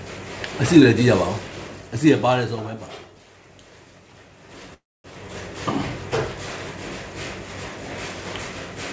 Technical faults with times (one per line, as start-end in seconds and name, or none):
4.74-5.06 call audio freeze